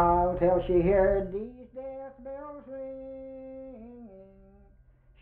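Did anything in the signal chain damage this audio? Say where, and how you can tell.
No, the signal reaches the listener intact, with no audible damage from any stage between capture and playback.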